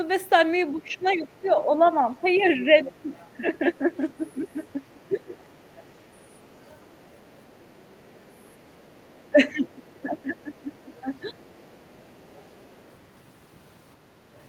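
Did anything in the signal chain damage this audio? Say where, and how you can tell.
Yes. Speech suppressed in double talk: the talker dips by up to about 15 dB across 0.71–5.34 s and about 20 dB across 9.31–11.47 s, likely the call processing's echo canceller ducking during overlap.

Other side's voice leaking through: a second voice sits underneath at 0.92–3.35 s (about 20 dB down), 3.96–10.02 s and 10.79–12.95 s (about 35 dB down). That's likely residual loudspeaker echo the canceller missed.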